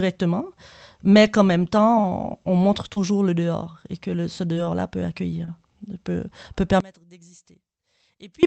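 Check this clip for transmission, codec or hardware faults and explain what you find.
Two faults turn up: brief packet dropouts in the call stream, and a polarity problem near the end of the speech.

Short concealed packet loss, at 2.01–2.05 s, 2.93–2.99 s, 4.54–4.57 s and 5.45–5.49 s: about 20 ms of audio went missing each time. The receiver extrapolated the preceding sound to cover it, leaving a quick smear or wobble.

One channel inverted, 6.80–8.43 s: one stereo channel likely has reversed polarity, so summing to mono cancels the shared speech, dropping it by about 26 dB to a faint residue.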